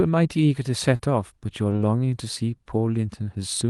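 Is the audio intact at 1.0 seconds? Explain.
No. At 0.95 to 1.01 s there's a short concealed packet loss: about 40 ms of the call arrived too late, so the receiver patched the gap by extending the preceding sound and then blended back into the real signal, leaving a brief smear.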